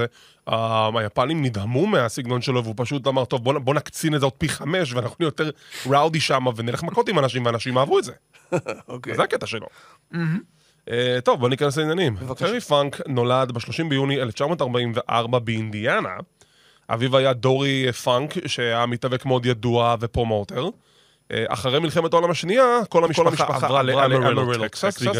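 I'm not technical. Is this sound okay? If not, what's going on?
No. From 23.07 s to the end, a doubled audio track appears: the speech plays twice, with a copy just as loud trailing about a fifth of a second behind and starting abruptly. Likely the same sound was picked up again through a slower path.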